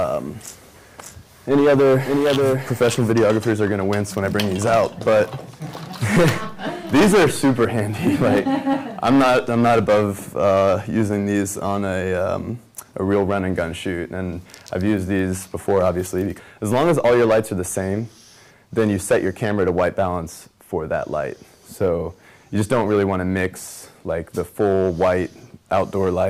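From the start to 3.12 s, a doubled audio track: a full-band copy trails about half a second behind, around 5 dB quieter and with no decay, then stops abruptly. It likely comes from a slower second capture path or an edit holding two offset copies. A spectrogram shows every feature repeated at that fixed lag.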